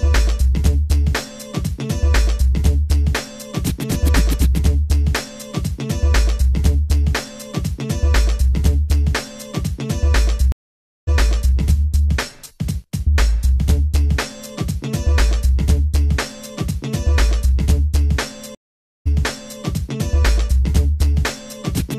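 Two stream reconnects break the audio, at 10.52–11.56 s and 18.55–19.61 s: about 0.55 s and 0.51 s of silence, then a fresh decoder resumes roughly half a second earlier, repeating material. That repeat, plus a faded restart, separates it from a plain dropout.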